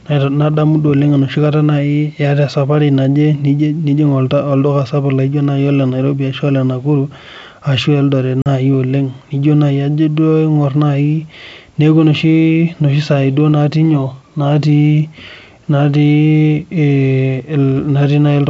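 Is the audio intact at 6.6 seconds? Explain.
Yes, the speech at 6.60 s is intact, with no fault at that moment, and the G.722 wideband telephone coding at 64 kbit/s leaves at most a faint trace there.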